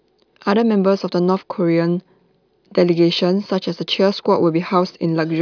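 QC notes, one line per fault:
Nothing stood out on listening to this speech clip.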